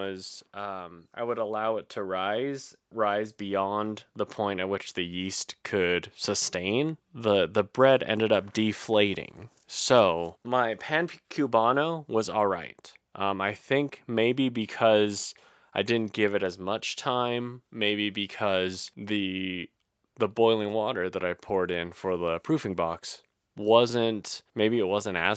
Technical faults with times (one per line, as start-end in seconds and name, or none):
0.53-5.46 automatic gain rising